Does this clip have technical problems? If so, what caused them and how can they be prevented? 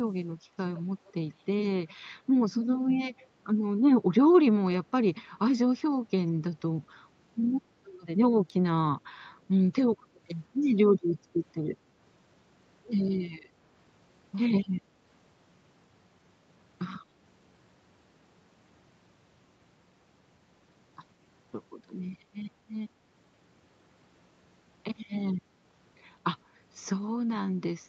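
Yes. Faint, delayed repeats of the speech trail it at 0.58 to 0.82 s, 1.05 to 1.13 s and 3.19 to 3.23 s, lagging by 165 ms and sitting far below the speech. This is likely echo leak: the far end's loudspeaker reached its microphone and the echo canceller let fragments through. A headset on that side, or a better-converging echo canceller, would prevent it.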